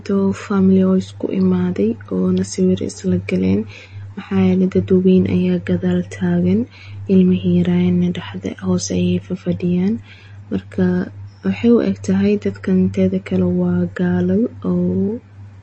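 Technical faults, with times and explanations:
Throughout, MP3 compression: the speech has plainly audible codec damage and nothing above 8.3 kHz, which points to a low bitrate near 32 kbps. With so few bits to spend, the encoder likely cut the treble at a fixed point and dropped quieter frequency lines, which flicker on and off between frames. That gives the speech a watery, swirling texture, with metallic chirps on s sounds and smeared consonant attacks.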